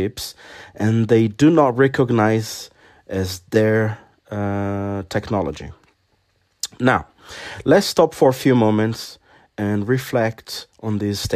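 A speech recording in which no technical fault can be heard anywhere in the signal.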